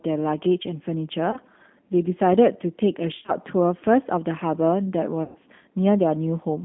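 Throughout, the speech carries G.729 codec damage at 8 kbit/s: the line band sits at about 200 Hz to 3.6 kHz, and the pulse-based rebuilding of each frame gives a plainly rough, synthetic edge to the speech.

Packet loss concealed by the speech codec appears at 1.31 to 1.38 s, 3.18 to 3.32 s and 5.23 to 5.36 s. The decoder repeats its last pitch and filter at falling gain, so the sound is stretched and fades. The second burst is broken up, and the third, which fits about 120 ms missing, drags longest before recovering.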